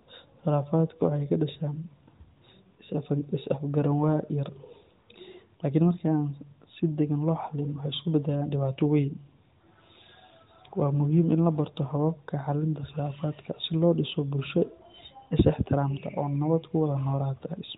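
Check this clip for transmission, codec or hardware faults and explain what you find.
No transmission, codec or hardware faults are present in this speech clip, which carries the narrow telephone-band sound of the AMR narrowband mobile codec working as intended.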